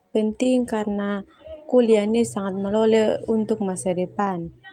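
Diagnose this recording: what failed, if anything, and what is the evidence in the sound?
Network: short concealed packet loss at 0.43 to 0.47 s. The decoder bridged a 20 ms gap by extending prior sound, leaving a brief smear.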